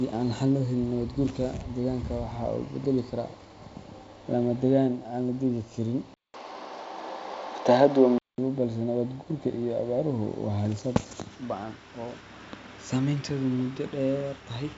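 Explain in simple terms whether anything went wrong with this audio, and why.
From 6.14 to 8.38 s, after a 0.2 s gap at the switch, the speech turns dull and boxy, loses everything above 6.6 kHz, changes in level and picks up new background noise. This is likely an input switched to a poorer device. The words "balse nabaad" come just after the switch.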